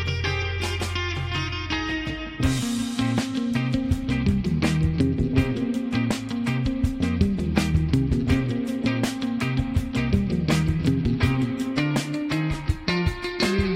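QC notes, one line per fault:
No fault found; there is nothing to log for this clip.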